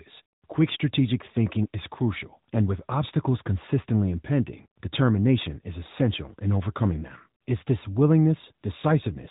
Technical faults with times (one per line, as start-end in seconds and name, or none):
0.00-9.30 AMR narrowband mobile codec